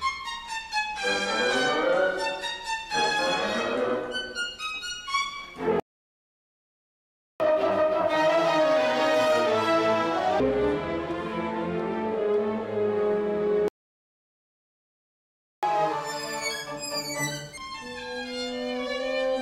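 A playback stall at 5.80 to 7.40 s cuts the audio off mid-flow for 1.6 s of silence, and a second one at 13.68 to 15.63 s silences it for about 1.95 s. In both cases the output halts until the player recovers, likely because it ran out of data or its thread was blocked. Each stall is followed by catch-up at higher speed, where the player resamples its backlog to win back lost time. From 7.40 to 10.40 s the audio runs at 1.5 times normal speed with pitch raised by about seven semitones. From 15.63 to 17.58 s it runs at twice normal speed, about ten semitones higher. Both times the speed and pitch then drop back to normal.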